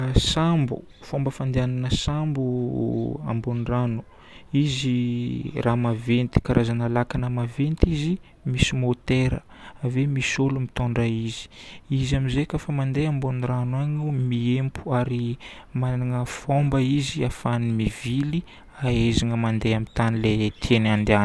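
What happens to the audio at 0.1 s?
At 0.1 s the speech runs on intact, with no dropout, click, distortion or other fault at that moment.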